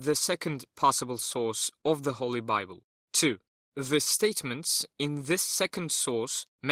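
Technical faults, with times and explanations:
1.81–1.86 s, short stall from a late packet: after "second possible source" a packet arrived late, so the receiver stretched the last sound by about 17 ms before resuming at "of the", with nothing lost. The spectrogram shows a brief smeared, repeated slice, and the waveform shows a slightly buzzy or dipped hold.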